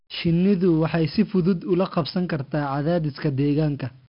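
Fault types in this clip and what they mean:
4-bit ADPCM compression: each sample is coded as a coarse 4-bit step from a prediction, so the speech carries heavy gritty hiss that rises and falls with its loudness. Nothing survives above 5.3 kHz, which dulls it and fits roughly 44 kbps.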